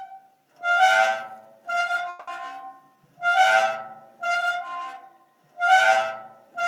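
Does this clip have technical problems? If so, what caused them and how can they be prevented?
Yes. From 2.09 to 2.29 s there is a call audio freeze: packets were likely held up in transit and the jitter buffer ran dry, so the receiver stretched the last sound into a fading buzz or hiss for 180 ms, then resumed exactly where it stopped, losing nothing but running 180 ms late. A larger adaptive jitter buffer on a steadier network path would prevent it.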